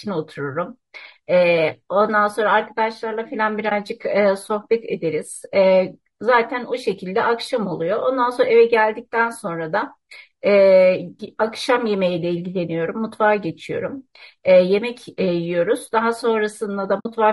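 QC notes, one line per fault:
throughout: low-delay AAC compression. The speech sounds rough and grainy, with noise filling the gaps between harmonics and a thin, synthetic top band. This is plainly audible and is likely AAC-ELD near 32 kbps, whose short frames resolve pitch poorly. It is a steady texture, not a dropout.
3.69–3.72, 11.25–11.29, 16.99–17.06: AAC frame loss with muting. There are brief dips of about 20 ms and 20 ms and a soft-edged hole of about 60 ms, where the last spans three frames. The decoder zeroed the missing spectrum and the overlapping windows fade the sound out and back in.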